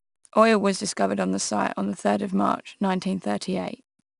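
From start to finish, the speech carries a gritty hiss that rises and falls with its loudness, plainly audible on the stronger syllables and roughest on abrupt onsets, while the top end stops dead at 10.6 kHz, leaving a dulled tone. This is 4-bit ADPCM compression: each sample is coded as a coarse step from a predicted value, so the error tracks the signal level, and the step size lags on sharp attacks. The bandwidth fits a stream around 88 kbps.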